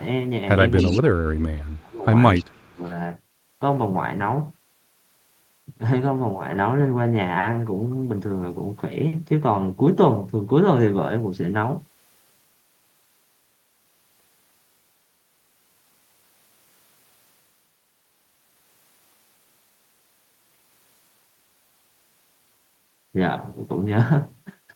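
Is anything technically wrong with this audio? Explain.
Yes, two kinds of fault appear in the first three seconds of this speech clip.

Echo leak at 0.75 to 1.01 s and again at 2.34 to 2.45 s: a faint delayed copy of the speech, about 15 dB below it the first time and about 20 dB below the second time, trails the original by 283 ms. It is likely that a far end on a loudspeaker let its microphone pick up the playback and its echo canceller failed to remove all of it, so the remainder came back as brief scraps.

Speech suppressed in double talk at 0.83 to 2.09 s and 2.38 to 2.82 s: the main speech sinks by up to about 25 dB, about one second in the first span and about 0.4 s in the second. This likely happens because, with both sides sounding at once, an echo canceller could not tell its own talker from the returning echo and turned everything down, so the speech is pushed under while the overlap lasts.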